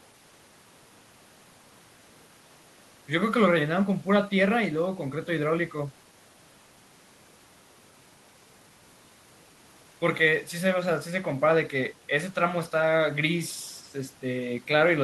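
Nothing stood out on listening to this speech recording.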